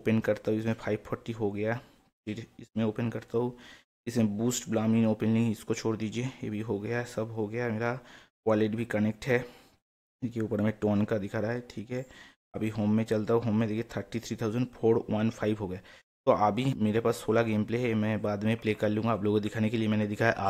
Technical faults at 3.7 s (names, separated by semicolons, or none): none